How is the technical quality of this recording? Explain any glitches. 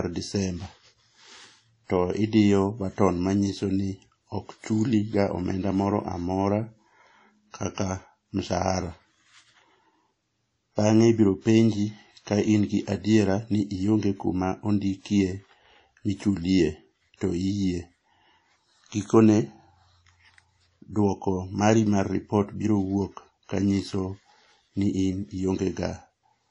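Technical quality is poor, with one fault present throughout. Likely WMA compression, at a low bitrate that fits 32 kbps: coarse quantisation smears noise and removes everything above 10.1 kHz, leaving the speech dull, ringing and washy.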